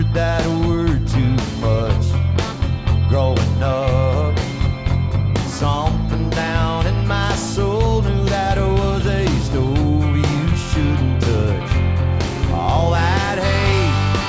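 No technical faults can be heard anywhere in this audio.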